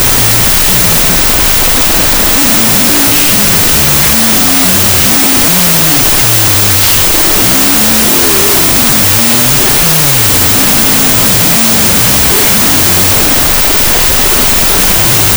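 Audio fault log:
throughout, wrong sample width: loud, dense noise buries the sound, which plays at half speed and an octave low. The 32-bit float samples are read as pairs of 16-bit integers, so the low-order halves become noise and only the upper halves keep coarse signal traces.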